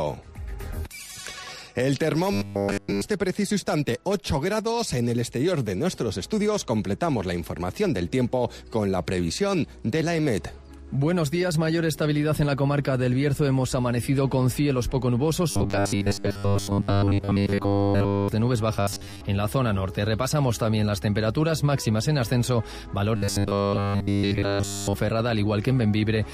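Robotic sound from repeated short buffers at 2.3–3.0 s, 15.5–18.3 s, 18.8–19.2 s and 23.2–25.0 s: a rigid, metallic 100 Hz buzz, likely from playback looping the last 10 ms of audio, fully in the first and last stretches and mostly in the middle two.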